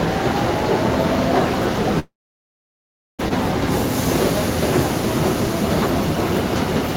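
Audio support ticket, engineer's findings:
Long network dropout, 1.99–3.21 s: likely packet loss; concealment smears last sound briefly, then about 1.08 s silence; resumes with roughly 1.2 s of audio missing.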